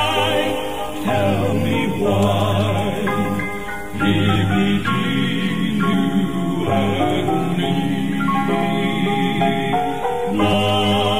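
Whole compressed frames went missing or were rejected by the decoder as damaged, so playback jumps ahead, and the jump sizes fit a frame of about 23 ms. This compressed frames skipped fault first drops roughly 50 ms at 0.93 s, then about a tenth of a second each at 4.34, 5.92, 8.62 and 10.52 s. Each skip sounds like a sudden lurch forward.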